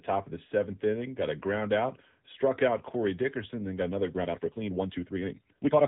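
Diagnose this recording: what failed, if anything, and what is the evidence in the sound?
The speech passed through an AMR narrowband mobile codec at 7.95 kbps, a codec-stage failure that plainly damages the audio. The signal was reduced to a telephone band, with nothing above 3.8 kHz, so sibilants and consonant edges are gone. At this low bitrate the vocal-tract model is fed by only a few pulses per subframe, so the speech comes out buzzy and synthetic.

From 4.1 s to the end, right after "then got another", there is a time-stretched section. This was likely software speeding up the tail to fit a length, which cuts short pieces out of the waveform so the pitch stays the same. The pace jumps abruptly to about 1.68 times normal while the pitch does not change, and the dropped pieces make the speech sound rushed.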